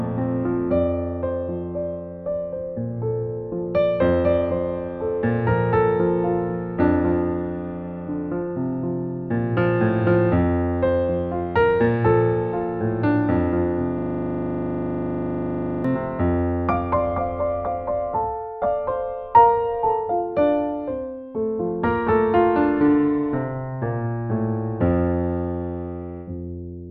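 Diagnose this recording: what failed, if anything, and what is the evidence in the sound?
The failure sits in the driver/buffer stage: a system hang loop from 13.98 to 15.85 s. For nearly two seconds the same 40 ms slice of audio repeats exactly, about 47 times, so you get a rough buzz at 25 Hz instead of anything moving forward. The host or driver stalled while the interface kept replaying whatever sat in its ring buffer, and that period fits a buffer roughly 40 ms long.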